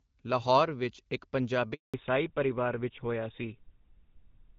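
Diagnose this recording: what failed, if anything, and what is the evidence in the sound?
A handover gap hits the network stage: the speech cuts out at 1.74 s and stays silent for 200 ms until 1.94 s. No frames arrived while the call moved between networks, so the voice decays quickly and that stretch of speech is lost.

From 1.94 s to the end, a fallback to narrowband takes over at the codec stage. The light HD Voice coding heard earlier gives way to audio with nothing above 4 kHz, duller and rougher, which fits a switch to the GSM full-rate codec.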